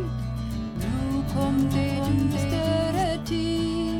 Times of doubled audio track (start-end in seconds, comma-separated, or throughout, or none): 0.76-3.04